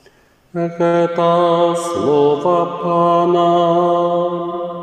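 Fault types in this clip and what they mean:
Short stall from a late packet: A packet arrived late and the jitter buffer briefly ran dry. The receiver held the last sound for about 59 ms, from 0.87 to 0.95 s. Then it resumed at the same spot. Nothing is lost, but everything after plays 59 ms later.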